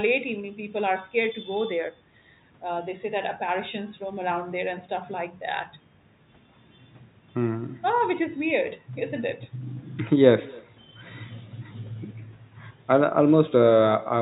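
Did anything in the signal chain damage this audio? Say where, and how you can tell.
Yes, at the call-processing stage. An echo with no canceller runs through the whole speech clip. Each phrase is followed, around a third of a second later, by a faint copy about 25 dB down. That copy sounds thin. The far end played the call over a loudspeaker, its microphone caught it, and no echo canceller removed it. The copy came back after the network round trip. The band stops at 4 kHz, which fits a G.711 call codec.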